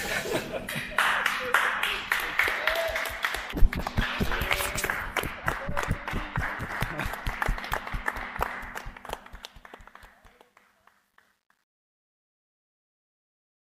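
From about 8.62 s the fade-out starts, and truncation distortion creeps in as the level drops. The fade stage is keeping only about 11 bits without dither, so from 9.84 s to the end at 13.64 s the tail turns gritty.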